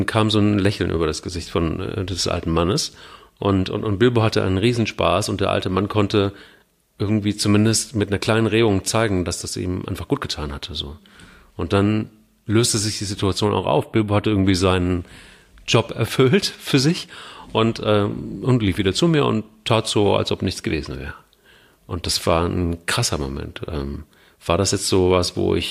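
Right after "dann löste sich die", from about 13.45 to 14.45 s, you get a stretch of channel delay, so comb filtering. One side is running a few samples late, about 0.07 of a millisecond, and when the two get folded to mono the shared content cancels at evenly spaced frequencies, the first notch landing around 7 kHz. For that second the speech picks up a hollow, phasey colour from those fixed notches, then it snaps back.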